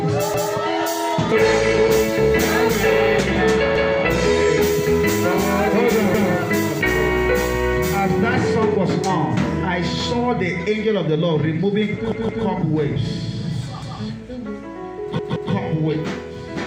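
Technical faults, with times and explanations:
0.34 to 15.53 s, repeated buffer: stutters at 0.34, 3.76, 6.14, 12.12, 13.82 and 15.19 s, each replaying a 0.17 s piece with a hard join, twice over at 12.12 and 15.19 s. Fresh audio arrived late, so the device replayed its last chunk, which fits an 8192-sample buffer.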